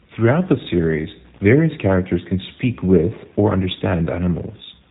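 From start to finish, the speech has passed through a G.729 codec, a low-rate voice coder that keeps only a vocal-tract filter, a pitch predictor and a handful of pulses per short frame instead of the actual waveform, which fits an 8 kbit/s link. Nothing above 3.8 kHz survives, so the sound is narrow and muffled, and the rebuilt excitation gives it a plainly audible rough, buzzy, synthetic edge throughout.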